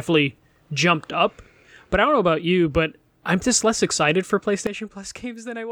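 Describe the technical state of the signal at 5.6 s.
At 5.6 s the level sits in a sudden gain jump, dropping about 12 dB from 4.67 s after "just less excited for", likely an unramped gain change; the waveform steps down abruptly, and the spectrogram dims everywhere, noise included.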